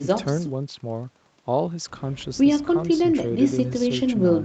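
Nothing stood out on listening to this speech clip; its content tops out around 8 kHz, which fits the band limit of the call path it went through.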